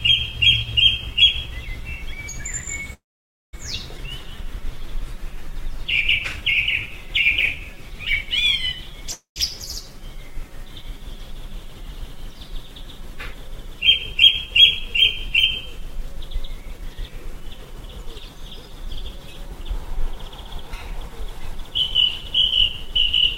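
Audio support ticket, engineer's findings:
Call audio freeze, 2.93–3.55 s and 9.12–9.38 s. Last sound carried on as a fading buzz, then silence: about 0.53 s of the 0.6 s gap at 2.93 s, 0.13 s of the 0.24 s gap at 9.12 s. Likely cause: delayed packets draining the jitter buffer. Playback resumes where it stopped, with nothing lost and latency extended.

Skip ahead, 3.97–4.00 s. Abrupt forward jump, near-seamless splice, roughly a fifth of a second of audio gone. Audio dropped in transit or by an overflowing jitter buffer, trimming some of the added delay.

Jitter buffer slow-down, 4.06–7.56 s. Sound drawn out at unchanged pitch, running at 95% speed, 177 ms inserted via repeated pitch periods and pause fragments. Buffer rebuilding its reserve.

Jitter buffer speed-up, 16.50–21.71 s. Audio hurried at unchanged pitch, 105% speed, roughly 0.3 s cut as short pitch-period chunks. Buffer over target, shedding excess delay.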